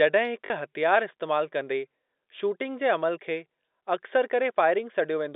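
Speech carried over a G.711 telephone line, band-limited to roughly 250 Hz–3.7 kHz, has a brief packet loss with last packet repeated at 0.46–0.50 s, just before "हथियार इस्तेमाल". About 40 ms goes missing, which fits two 20 ms packets replayed, giving a robotic stutter. On a waveform the same short segment repeats with a step at each join.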